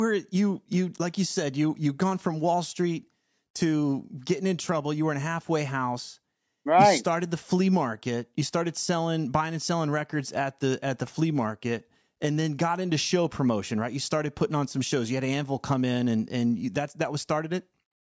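No technical faults are audible anywhere in the speech recording.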